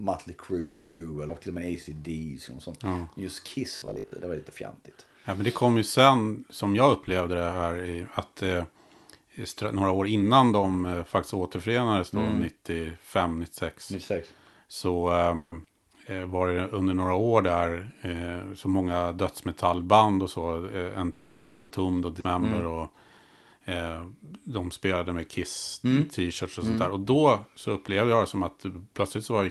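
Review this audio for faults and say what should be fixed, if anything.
Call audio freeze. Packets were most likely held up in transit, so the jitter buffer ran empty three times: 0.59 to 1.02 s, 15.36 to 15.54 s and 21.12 to 21.72 s. Each time the receiver stretched the last sound into a buzzy tail for 410, 160 and 580 ms instead of going silent. When the packets arrived, the speech resumed where it had stopped, so a gap was inserted but nothing was lost. Prevention: fix the network path's delay spikes, for example with prioritisation (QoS) or a less congested route.

Skip ahead. A stretch of audio was dropped while later audio was already waiting. The jumps fall at about 1.28 s, 15.64 s and 22.20 s, and each is joined with roughly 10 ms of fill. About a fifth of a second is missing at the first, well under a tenth at the second and about a sixth at the third. The speech lurches forward. 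Prevention: let the buffer drain its excess gradually through time-scaling rather than discarding a block.

Jitter buffer slow-down. The buffer was low or had just raised its target delay, so it rebuilt its reserve by repeating pitch periods. From 1.52 to 3.47 s the speech plays at 92% speed, adding 173 ms. From 16.15 to 16.63 s, just before "under några år", it plays at 86% speed, adding 77 ms. In both stretches the voice sounds drawn out at an unchanged pitch. Prevention: smooth the jitter estimate so that the target delay changes less abruptly.

Robotic sound from repeated short buffers. From 3.76 to 4.12 s, just before "det var lite fjantigt", new audio was likely arriving too seldom, so the last short block was replayed while real audio was skipped. Roughly half the stretch is repeats. This imposes a fixed 50 Hz buzz, which fits a 20 ms block looping, and the voice turns rigid and metallic. 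Prevention: stop the audio callback from starving, for example by fixing the thread's scheduling or using a larger device buffer.

Jitter buffer speed-up. The buffer held more audio than its target, so it trimmed pitch periods to reduce the delay. From 6.74 to 10.59 s the speech runs at 110% speed. From 19.18 s, right after "eh så många", to 29.32 s it runs at 104% speed, with the 21.12 s freeze and 22.20 s skip falling inside that stretch. Each stretch loses roughly 0.4 s, and the first sounds hurried at normal pitch. Prevention: cap how fast the buffer may shrink once a burst of packets has arrived.

The Opus path has a band limit near 12 kHz, which fits 32 kbps.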